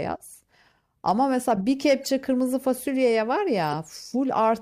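From 2.04 to 2.09 s, bit errors in roughly three compressed frames were decoded anyway, misplacing spectral energy into a brief chirp-like burst peaking around -30 dBFS. At 3.62 to 3.74 s, compressed frames were skipped, so the speech jumps ahead by about 30 ms.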